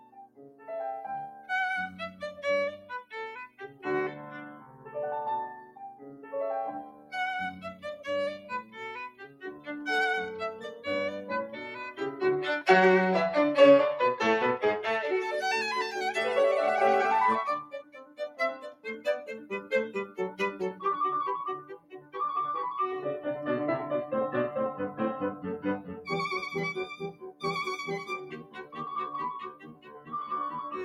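Throughout the music, a noise suppressor tuned for speech treats sustained tones and reverb as noise, so the level swings by roughly 10 dB. Attacks survive while held notes sink, which gives a pumping, fluttering thinness. A compressor would instead follow overall loudness rather than sparing transients.

Sound cut by the noise suppressor occurs from 0.0 to 9.68 s (about 16 dB down), from 10.65 to 12.2 s (about 9 dB, briefly), from 17.63 to 22.15 s (about 17 dB) and from 25.33 to 30.13 s (about 16 dB). Held and fading sounds sink in level or have their decays clipped short.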